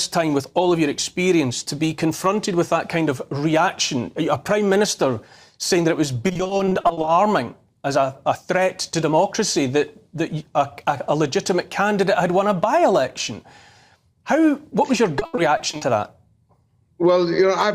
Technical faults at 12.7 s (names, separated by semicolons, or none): none